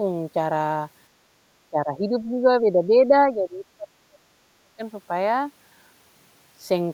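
Speech, with two stretches of speech suppressed in double talk, from 1.7 to 3.13 s (a shallow dip of about 10 dB) and 3.29 to 4.82 s (deep, near-silent cuts of about 35 dB). The waveform shows chopped amplitude; the spectrogram shows faded or missing bands, likely from an echo canceller muting during overlapping talk.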